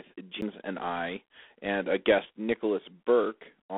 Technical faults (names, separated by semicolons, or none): G.726 ADPCM; CD skip